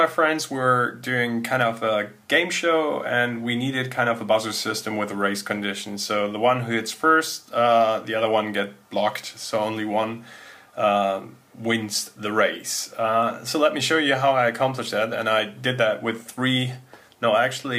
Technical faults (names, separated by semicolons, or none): none